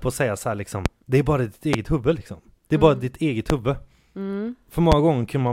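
Four loud pops land at 0.86, 1.73, 3.50 and 4.92 s, the first right after "och säga så liksom," each a single sharp spike about 20 dB over the speech, likely electrical glitches.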